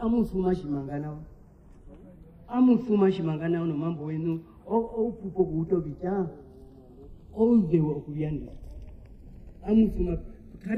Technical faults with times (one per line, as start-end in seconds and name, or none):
0.00-10.77 channels drifting apart